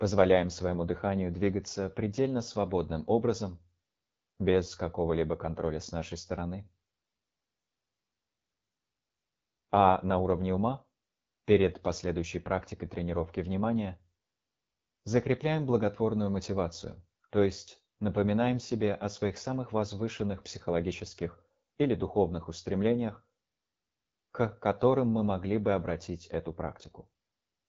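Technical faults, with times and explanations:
Throughout, AMR wideband (HD Voice) codec: the speech is rough and raspy, and nothing is present above about 7.4 kHz. The codec rebuilds the lower band, up to 6.4 kHz, from a vocal-tract filter driven by pulse patterns and replaces the top strip with shaped noise. Here the coarse modelling is plainly audible, which fits the 8.85 kbit/s mode, one of the two lowest rates, where too few bits remain for clean excitation.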